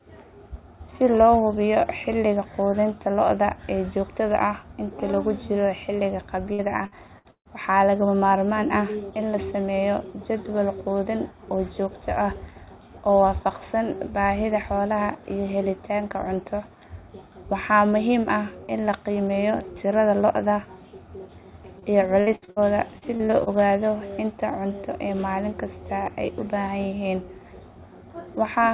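A speech recording heard through a narrowband call path, with nothing above 4 kHz, which fits G.711 mu-law. It shows repeated packet loss (robotic sound) from 6.53 to 7.48 s, between "inta lagu jiro xilliga" and "waxaa lagama maarmaan ah", then from 22.21 to 22.59 s and from 22.98 to 23.49 s, just before "ogaado inta cunto ee". Four or five holes recur within each stretch, the longest 147 ms, each patched by extending the previous sound, so the speech turns choppy with pieces missing. A single short concealed packet loss at 21.79 to 21.85 s differs in being one isolated 30 ms gap, heard only as a brief smear or wobble rather than a sustained robotic stretch.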